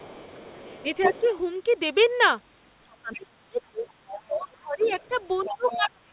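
From the start to 1.23 s a faint second voice runs under the speech, about 20 dB below it. This is the other side's voice leaking through: the far end was likely playing on a loudspeaker and the echo canceller left part of it in the microphone signal. Between 0.57 and 1.29 s the main speech itself dips in pieces, about half a second in total and down by roughly 15 dB at worst. That is speech suppressed in double talk, likely because the canceller could not tell the talker from the echo while both overlapped and turned everything down.

The leak returns briefly from 2.91 to 3.16 s at a similar low level. From 3.0 s to the end the speech is pushed down harder, by about 25 dB at its deepest. From 3.88 s to the end the leaking voice grows to only about 10 dB below the speech. Throughout, the band stops at 4 kHz, which fits a G.711 mu-law call path.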